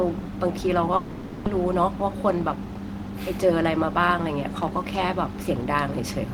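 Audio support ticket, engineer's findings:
Long network dropout, 0.96 to 1.47 s: the last sound gets stretched into a fading buzz for about half a second, then the audio resumes with roughly 300 ms of content simply gone. No true silence, just the concealment tail covering the gap. Likely a burst of lost packets on the network path, with the receiver's loss concealment bridging it.

Jitter buffer speed-up, 1.65 to 2.84 s and 3.44 to 4.14 s: audio runs faster, 104% then 106%, pitch unchanged. That's the jitter buffer draining a backlog, trimming tiny pitch-period slices repeatedly, around 50 ms in each stretch, to pull latency back down.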